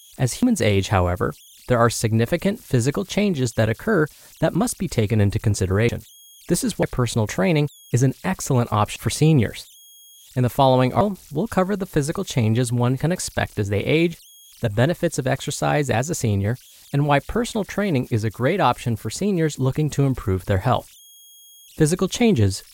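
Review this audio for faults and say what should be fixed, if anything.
Converter idle tones run throughout: a whistle of about 3 kHz, about 31 dB below the speech. It comes from an undithered delta-sigma converter cycling through repeating bit patterns. Unlike steady hum or electrical interference, it sits high rather than at a mains-related frequency. Adding dither to the converter, or using one that dithers internally, would break up these patterns.

Dropped buffers, likely from overruns, cause a jump forward with no gap at 0.43, 5.89 and 6.83 s (just before "personal training is an"). Each skips roughly a tenth of a second. Two longer jumps of about a third of a second come at 8.96 s, between "training is an excellent" and "for seniors", and at 11.01 s, between "the following" and "we'll cover the physical". Unlike dropouts, nothing falls silent; the sound simply jumps ahead. Larger capture buffers and a higher-priority recording thread would let the program read samples before the hardware overwrites them.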